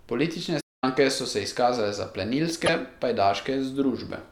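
At 0.60 s the player likely stalled, starved of data or blocked, so the speech cuts to silence for about 0.22 s before resuming at 0.84 s. From 2.65 to 2.69 s, a likely broken MP3 bit reservoir makes a frame decode against the wrong bytes, leaving a brief glitch about 40 ms long, with 24 ms frames, as the audio skips ahead.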